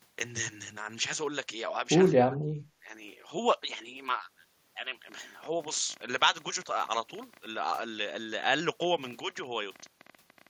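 From 2.13 to 2.59 s the speech sinks by about 30 dB, speech suppressed in double talk, likely an echo canceller muting the near talker while the far side spoke. Then from 5.09 s to the end at 10.48 s there's a train of clicks, around 11.3 per second at an uneven pace, roughly seventy ticks about as loud as the speech, likely interference or a faulty connection.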